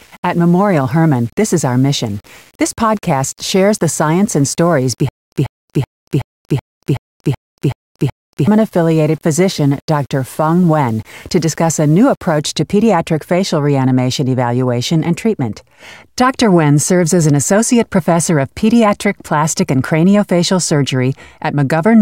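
From the start to 12.40 s, just before "to pediatric facial reanimation", the speech turns grainy and gritty, likely low bit depth without dither at around 7 bits, with noise only about 35 dB down.

Between 5.09 and 8.47 s there's a stutter with silent gaps: a 0.14 s burst repeats every 0.38 s, with dead silence between, likely a stalled stream replaying.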